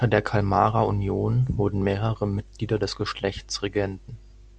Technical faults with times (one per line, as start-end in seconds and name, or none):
none